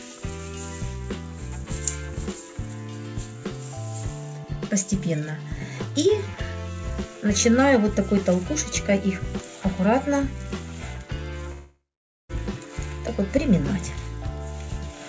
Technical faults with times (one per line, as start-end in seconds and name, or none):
11.52-12.31 call audio freeze